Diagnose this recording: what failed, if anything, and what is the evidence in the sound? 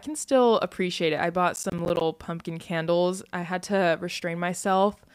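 Processor overload crackle, at the driver and buffer stage, from 1.55 to 2.01 s. About fifteen buffers of roughly 10 ms missed their deadlines, leaving hard-edged silent gaps.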